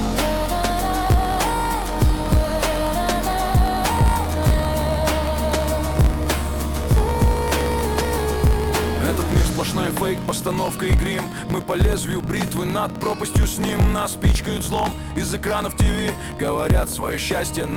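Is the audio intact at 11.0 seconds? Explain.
No. At 11.0 seconds, as throughout the clip, a block size mismatch (truncated) is at work: one stage writes longer blocks than the next reads, which fits 1024-sample blocks, and the tail of each is discarded. This leaves a buzz at 54.4 Hz and audio running 1.16 times fast with its timbre kept.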